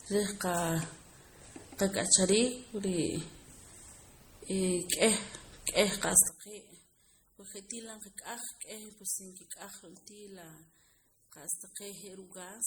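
Throughout, the audio was likely passed through one lossy codec and then re-encoded by another; the artefacts point to MP3 followed by Opus, both around 48 kbit/s. This transcoding between lossy codecs stacks two kinds of coding smear on the speech, while the band still extends to about 20.1 kHz.

From 6.29 s, just after "k'eh k'eh qa'sa", to the end, one channel was likely inverted in polarity. When the channels are summed to mono, the shared centre content cancels, so the speech drops by about 15 dB and what remains is a faint copy.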